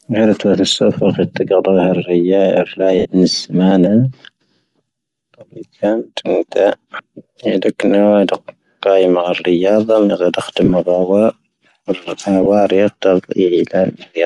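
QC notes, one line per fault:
Throughout: Bluetooth LC3 compression is plainly audible on this speech, with a breathy, grainy edge on the upper frequencies where the codec drops detail and fills the gaps with noise. That's likely LC3 on an LE Audio link, and the artefacts fit a 7.5 ms frame at around 48 kbps.
2.99–3.05 s, 10.64–10.71 s, 12.43–12.46 s: lost LE Audio frames, three short dropouts of 60 ms, 45 ms and 22.5 ms. In each one the decoder repeats the last spectrum with scrambled phase, so the sound smears into a noisy wash. The middle one breaks up into bits over about 60 ms, and its longest stretch is around 40 ms.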